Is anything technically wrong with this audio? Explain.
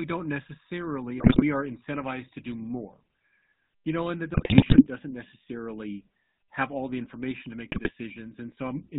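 Yes. The whole clip sounds like GSM full-rate codec speech, which fits a 13 kbps phone link. The codec rebuilds the voice from a vocal-tract model driven by sparse, regularly spaced pulses and drops everything above 4 kHz. You get a muffled top end and that buzzy, gravelly roughness throughout.

On top of that there are three bursts of GSM bit errors, where corrupted filter, pitch and gain values reach the decoder and wreck the speech for 10 to 23 frames at a time. These show up as squawks, pops and gargling. The first runs from 1.18 to 1.43 s, between "don't necessarily" and "are incentivized to do". The second and longest runs from 4.34 to 4.86 s, after "you know and that" and before "doesn't necessarily have all". The last runs from 7.72 to 7.92 s, right after "the information to make". The damage points to an error rate of roughly 2.6 to 4.6 percent on a weak link.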